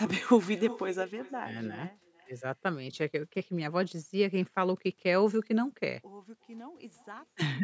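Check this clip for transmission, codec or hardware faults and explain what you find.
One fault runs throughout: echo with no canceller. The far end's loudspeaker leaks into its microphone unremoved, so each phrase returns roughly 0.4 s later as a thin copy about 19 dB quieter.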